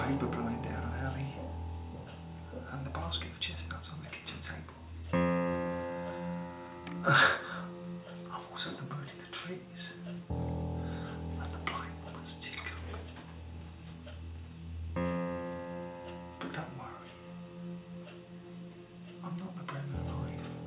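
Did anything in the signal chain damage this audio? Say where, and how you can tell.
No, nothing in the signal chain audibly damaged this audio, and there is nothing at any point that traces back to wiring, conversion, buffering, processing, transmission, storage or playback.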